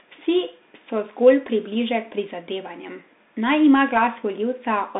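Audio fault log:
Throughout: Bluetooth CVSD headset codec. The speech is confined to a narrow phone-like band of roughly 200 Hz to 3.7 kHz, with nothing above 3.8 kHz, and the codec damage is plainly audible. Each sample is sent as a single up-or-down step, which fits a 64 kbps CVSD link. Unlike a clean telephone band-limit, the stepping leaves a granular hiss under the speech, and fast loud sounds outrun the step size and turn scratchy.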